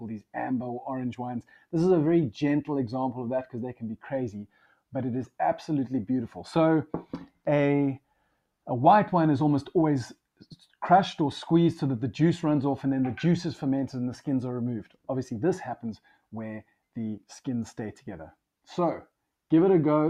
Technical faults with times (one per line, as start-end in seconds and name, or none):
1.42-1.73 sound cut by the noise suppressor
4.45-4.74 sound cut by the noise suppressor
7.05-7.46 sound cut by the noise suppressor